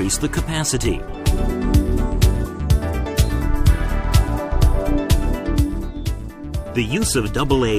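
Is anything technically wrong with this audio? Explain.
Yes, there are two separate decoding faults.

From 1.07 to 1.14 s, compressed frames are skipped. Roughly 70 ms of audio never reaches the output, either because those frames are missing from the stream or because the decoder rejected them as damaged. Playback jumps ahead by a whole number of frames, so the sound lurches forward at the join.

From 7.11 to 7.14 s, a corrupt frame is decoded. A small run of damaged frames, about four, still went to playback after bits were flipped inside them. The misread gains and codes put energy at the wrong frequencies for the length of the damaged section. The result is a brief, loud chirpy burst of noise peaking near about -5 dBFS.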